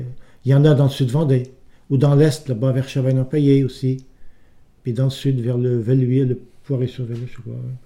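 Nothing is technically wrong with this audio; no fault can be heard anywhere in it.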